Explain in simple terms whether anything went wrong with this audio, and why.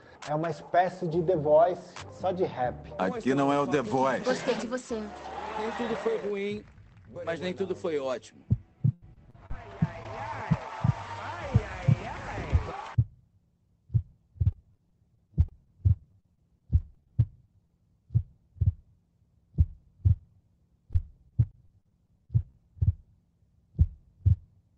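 The call connection kept losing data packets between 8.93 and 10.55 s, 14.47 and 17.71 s, and 20.93 and 22.55 s. This is repeated packet loss, which leaves the sound choppy, with pieces missing. At 18.11 s one lost packet was rebuilt from error correction, a backup copy that plays rougher instead of dropping out.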